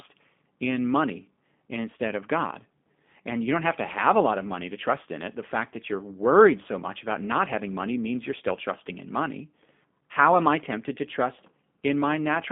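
Throughout, the speech carries plainly audible G.729 codec damage: band-limited to roughly 200 Hz–3.5 kHz, rough and synthetic from pulse-based excitation, consistent with 8 kbit/s coding.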